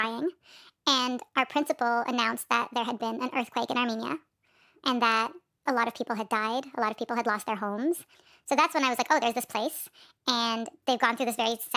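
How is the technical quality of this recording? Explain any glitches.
Poor: the whole recording plays back too fast. Throughout, a wrong sample rate makes speech run about 1.45 times faster and roughly 6.5 semitones higher, fitting 22 kHz audio played at 32 kHz. Speed and pitch shift together, unlike a pitch-shift fault.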